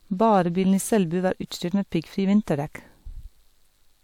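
Speech, with hard clipping from 0.21 to 0.41 s. For about 0.2 s the signal exceeds what one stage can pass by about 1 dB, so its peaks are cut flat. The flattened tops add high harmonics, heard as crackle on the loudest moments.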